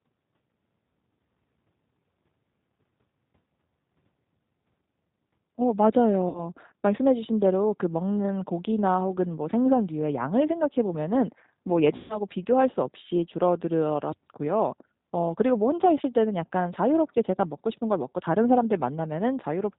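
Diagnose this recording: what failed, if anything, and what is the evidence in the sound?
The codec stage is at fault throughout: the G.729 codec (the G.729A variant) is audibly damaging the speech. Nothing reaches above 4 kHz, and the voice has a rough, slightly synthetic texture, which fits an 8 kbit/s codec rebuilding each 10 ms frame from a vocal tract filter, a pitch predictor and a few pulses. A plain 8 kHz-sampled line would be band-limited but clean. This roughness comes from the parametric model.

The network stage shows VoIP packet loss concealed by the speech codec at 6.29 to 6.46 s and at 11.96 to 12.20 s. The losses are about 60 ms and 140 ms, which fits three and seven consecutive 20 ms packets. In each gap the decoder stretches its last pitch and filter into a buzzy tone or coloured noise that fades, and the voice stays weak for a short while after packets return. Plain dropouts would give silence or clicks instead of this smeared, decaying sound.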